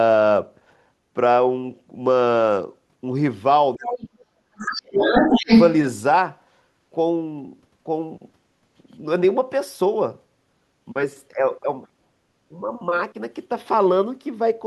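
Speech suppressed in double talk starts at 3.76 s and runs to 5.13 s. The talker's speech sinks very deeply, for about a second in total, likely because the echo canceller could not tell the talker from the loudspeaker echo and turned both down.

The other side's voice leaking through appears within that stretch, first as a faint scrap from 4.03 to 4.07 s. It returns from 4.58 to 5.71 s, now slightly louder than the talker, likely because the echo canceller left loudspeaker sound in the microphone signal.

A second, shorter suppression follows from 5.32 to 5.49 s, a brief and noticeably smaller dip, likely as the two sides overlap again.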